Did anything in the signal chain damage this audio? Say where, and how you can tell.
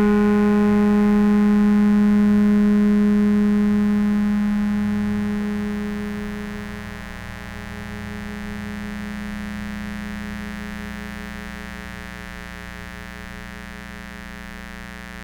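Yes. The damage is in the analogue wiring: a mains buzz runs under the music for the whole clip, sitting only around 15 dB below it. It is a steady, raspy buzz rather than a smooth hum, built on a 60 Hz fundamental. Switching spikes from a dimmer, rectifier or unshielded cable arrive twice per mains cycle, 120 times a second, and their sharp edges spread harmonics up into the several-kHz range, which gives the buzz its edge.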